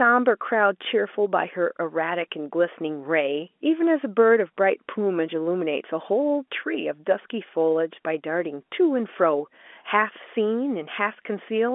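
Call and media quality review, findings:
No faults found in the speech; the G.711 A-law telephone path shows the expected narrow band of about 250 Hz to 3.5 kHz.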